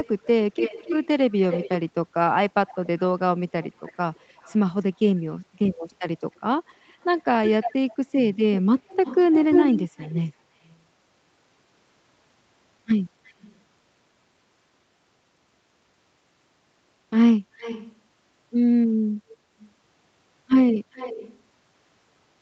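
Echo leak runs from the start of the clip to 1.78 s. A delayed copy of the speech comes back about 280 ms behind the original and nearly as loud as it, so the doubling is obvious. The likely cause is a far end on loudspeaker whose echo canceller failed to remove what its microphone picked up and sent it back down the line. The same fault returns faintly at 2.67 to 3.0 s and 3.62 to 4.57 s, then more clearly from 5.91 to 8.05 s and strongly again from 8.59 to 10.78 s.

Inside that last stretch, at 9.43 to 9.53 s, comes a lost packet rebuilt from error correction. Three packets failed to arrive, and the decoder filled about 60 ms with the low-bitrate copies carried in the packets that followed. There is no gap, but that short patch of speech turns rougher and noisier than the audio around it.

The echo leak comes back very faintly at 13.26 to 13.55 s and at a moderate level at 17.58 to 17.95 s. 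A second single-packet rebuild at 18.9 s swaps in a 20 ms rough, noisy fragment. The last echo, at 20.92 to 21.4 s, is moderate. Across the clip the echo delay stretches steadily from about 280 ms to 400 ms, so the returning copy trails the speech further each time.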